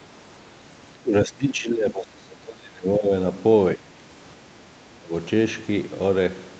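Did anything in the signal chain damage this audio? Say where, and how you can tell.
Yes. Speech is suppressed in double talk at 0.93–3.11, 3.76–4.08 and 4.97–5.13 s, dipping roughly 20, 15 and 20 dB. The likely cause is the call echo canceller ducking overlapping talk.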